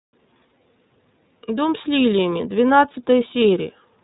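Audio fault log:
Throughout, iLBC codec: narrowband, nothing above 3.8 kHz, with plainly audible roughness and a synthetic edge from coding each frame independently, which fits the 30 ms, 13.33 kbps mode.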